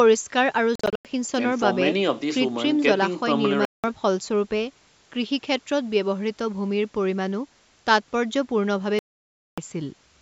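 Three gaps of silence cut through the speech. From 0.75 to 1.05 s, the sound breaks up into several short holes, totalling 200 ms, the longest 93 ms. From 3.65 to 3.84 s, one gap of 187 ms. From 8.99 to 9.58 s, a long 587 ms hole. Each gap has abrupt edges or a fade of a few milliseconds. The speech resumes further on, as if it kept playing unheard. This likely comes from a Bluetooth dropout, with audio packets arriving late and being discarded.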